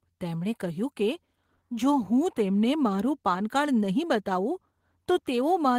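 No technical faults are audible.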